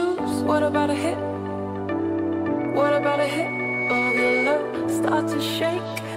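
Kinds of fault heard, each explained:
Loudspeaker feedback squeal: the microphone is hearing its own loudspeaker, and around 2.2 kHz the loop gain tops unity, so that tone feeds on itself. From 2.59 s it swells over roughly a second and a half to about 5 dB above the sound, cutting off at 4.63 s.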